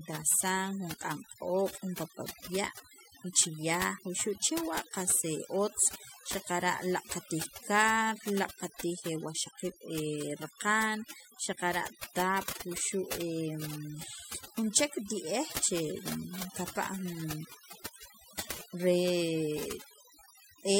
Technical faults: overdone noise removal

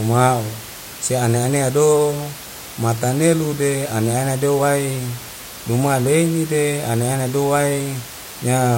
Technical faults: none

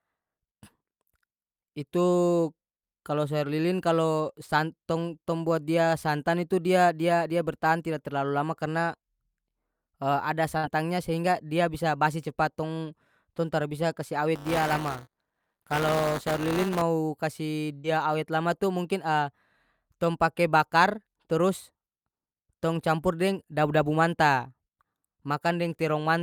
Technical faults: burst of packet loss; buffer tearing

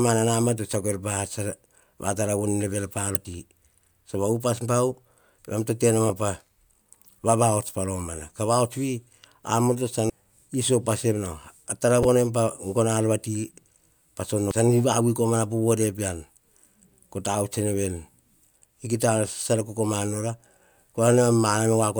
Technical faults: damaged data in a compressed stream

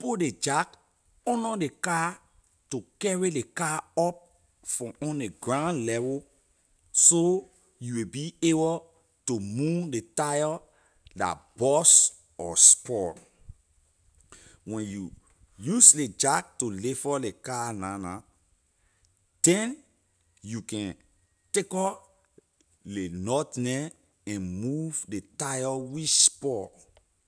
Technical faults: none

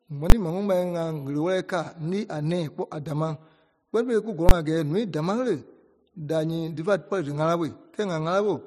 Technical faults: invalid numbers at full scale

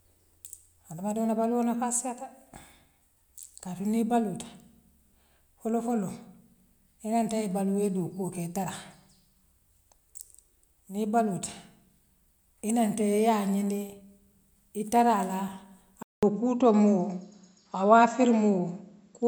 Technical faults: input switched to a poorer device

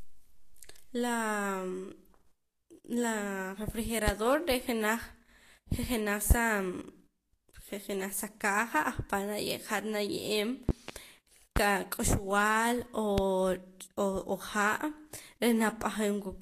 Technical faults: Vorbis compression; loud pop

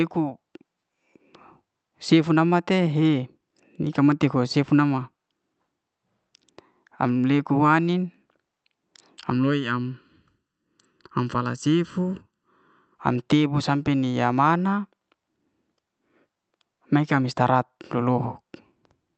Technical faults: channel delay (comb filtering)

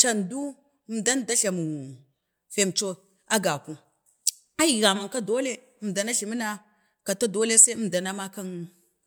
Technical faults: none

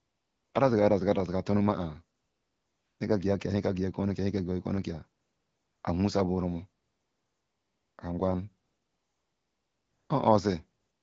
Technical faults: AMR comfort noise

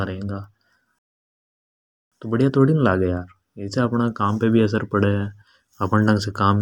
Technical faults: playback stall

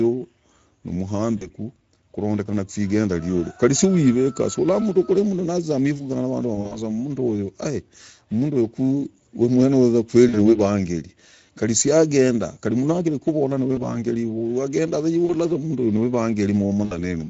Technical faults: Speex codec; VoIP packet loss concealed by the speech codec

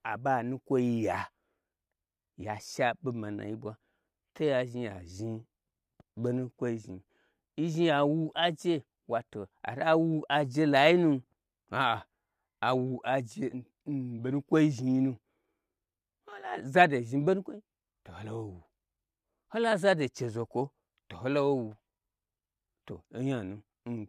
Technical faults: channel delay (comb filtering)

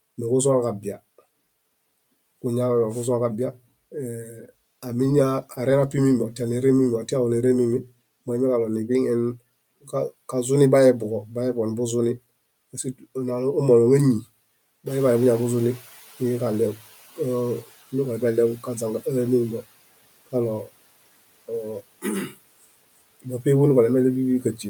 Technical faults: speech cut by the noise suppressor; noise suppressor catching up

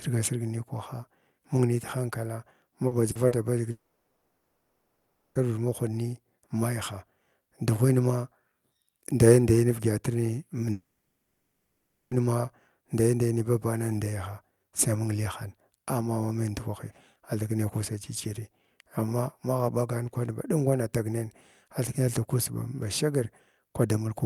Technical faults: short concealed packet loss; long network dropout

